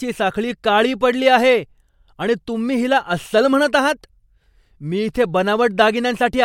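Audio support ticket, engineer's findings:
No audible fault found in the speech recording. Nothing to attribute to any component or mechanism.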